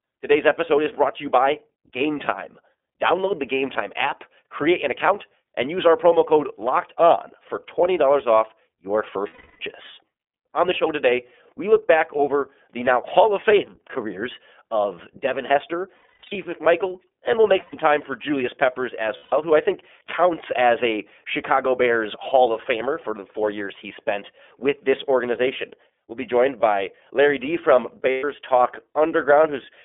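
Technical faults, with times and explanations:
throughout, iLBC codec: speech is band-limited to about 250 Hz to 3.5 kHz and sounds rough and synthetic; the 30 ms framing fits the 13.33 kbps mode.
9.27–9.60 s (after "off your"), 15.96–16.36 s (scattered short gaps), 17.60–17.74 s, 19.17–19.33 s, 28.10–28.24 s, lost iLBC frames: 120–330 ms gaps are filled with a repeated, buzzy pitch cycle mixed with noise, fading over the longer gaps. Speech snaps back immediately because each frame decodes independently.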